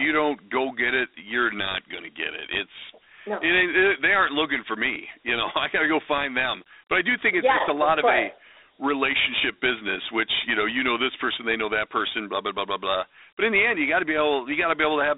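Speech throughout, encoded as Dialogic VOX ADPCM at a rate that fits 32 kbit/s, so it's band-limited to 300 Hz–3.7 kHz with nothing above 3.8 kHz and plainly audible gritty hiss trailing the voice.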